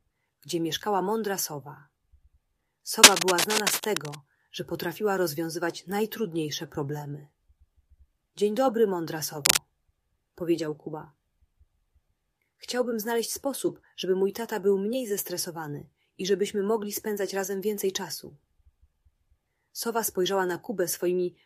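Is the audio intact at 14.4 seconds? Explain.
Yes, the audio is intact at 14.4 seconds, with no dropout, click, distortion or other fault at that moment.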